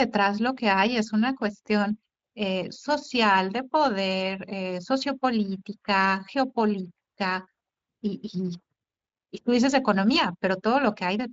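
Nothing stood out on listening to this speech recording, which comes through its Speex codec path with nothing that draws the ear.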